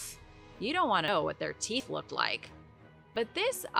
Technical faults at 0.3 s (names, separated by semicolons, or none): none